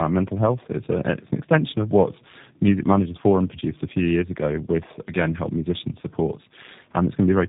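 Tandem speech coding throughout: rough, warbly, muffled speech cut off above 3.8 kHz, consistent with two 8 kbit/s G.729A passes bridged by G.711.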